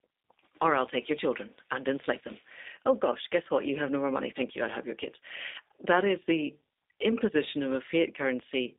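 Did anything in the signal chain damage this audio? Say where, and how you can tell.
Yes: the G.729 codec stage damaged the whole clip. The speech sounds rough and synthetic and is confined to about 250 Hz to 3.7 kHz, which fits an 8 kbit/s G.729 encoder rebuilding speech from a vocal tract filter, a pitch predictor and a few pulses per frame.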